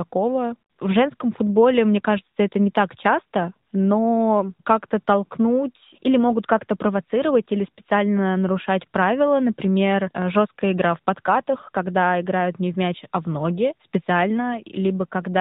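Throughout, the speech carries the AMR narrowband mobile codec. Nothing above 4 kHz survives. The synthetic buzz is plainly audible and fits a mid-rate mode near 10 kbps.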